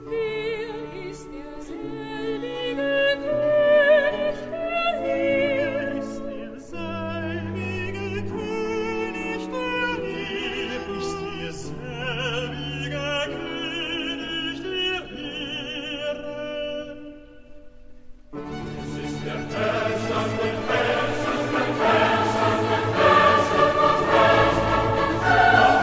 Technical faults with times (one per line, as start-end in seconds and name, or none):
none